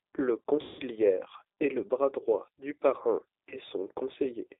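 The whole clip sounds like the G.729 codec at 8 kbit/s: speech is squeezed into roughly 300 Hz to 3.7 kHz and comes out plainly rough and synthetic. At 0.61 to 0.83 s and again at 3.49 to 3.58 s, there's VoIP packet loss concealed by the speech codec. The decoder stretches its last pitch and filter into a fading buzz or coloured noise, about 180 ms of lost audio first and then 30 ms.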